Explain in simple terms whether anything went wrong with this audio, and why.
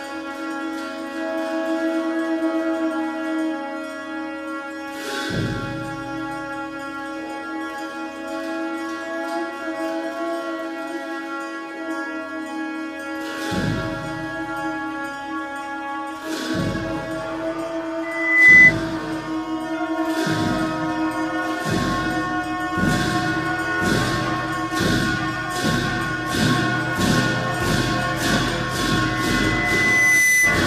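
Loudspeaker feedback squeal happens twice. A 2 kHz tone rises over about half a second from 18.03 to 18.74 s. It returns over about a second at 29.05 s and lasts to the end. The microphone was picking up its own loudspeaker, and that loop amplified the tone.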